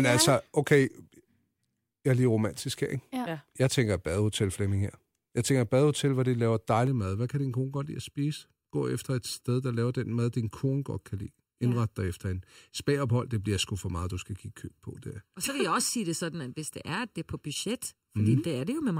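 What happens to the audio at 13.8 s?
Channel delay (comb filtering) runs from 6.87 s, just after "badehotel hvor de laver", to the end. One channel lags by under a millisecond before the mono sum, cancelling evenly spaced frequencies from around 700 Hz, so the speech sounds hollow and phasey.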